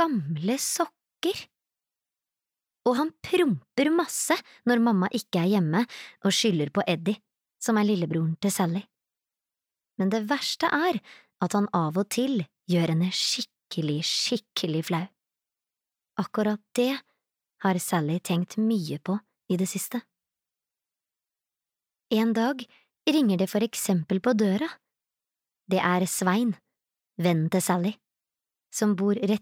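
No technical faults occur at any point in this audio.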